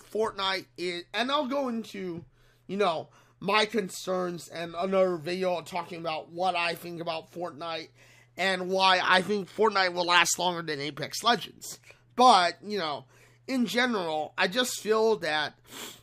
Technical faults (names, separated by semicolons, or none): none